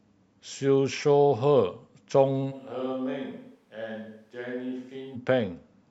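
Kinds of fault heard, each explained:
Switch to a distant microphone: from 2.53 s to 5.14 s the speech turns abruptly roomy and hollow, thinner in the bass and roughly 10 dB quieter, with room noise about 35 dB below it, likely a farther microphone standing in for the close one.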